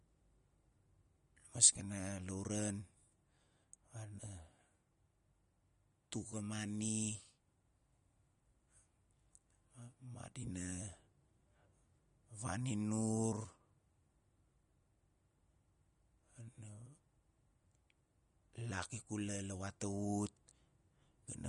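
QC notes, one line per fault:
Throughout, likely MP3 compression: nothing above 11.2 kHz, and weak frequency lines dropping in and out make the speech plainly watery, which fits roughly 46 kbps.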